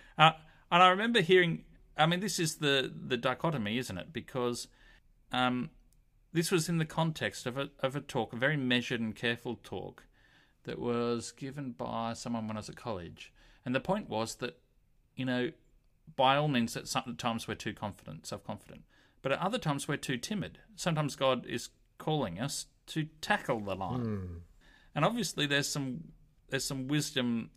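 Speech recording with no audible technical faults.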